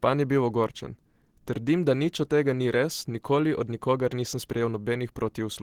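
The speech carries Opus compression damage that is plainly audible from start to finish, with a muffled, hoarse quality and a rough, grainy texture on the sound. This likely comes from Opus running in its hybrid speech mode at a low rate, which fits a bitrate of around 16 kbps. It differs from MP3 damage because the encoder keeps every band's energy and fills gaps rather than leaving holes, so there is little swirling or warbling, just noisy roughness.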